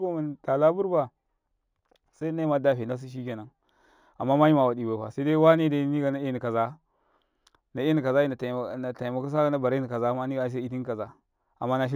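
It's a speech clip with imaging from linear upsampling throughout: the top end sounds dulled, and a faint metallic shimmer sits on sibilants from mirror images between 8 and 16 kHz, roughly 45 dB down. That fits 16 kHz audio raised to 44.1 kHz with simple straight-line interpolation.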